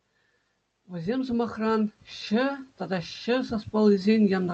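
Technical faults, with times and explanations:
0.71–2.73 s, automatic gain rising: the gain control judged the input too quiet and lifted it by about 7 dB over two seconds. Speech and background swell together, so the waveform envelope widens steadily and the spectrogram brightens evenly, noise floor included.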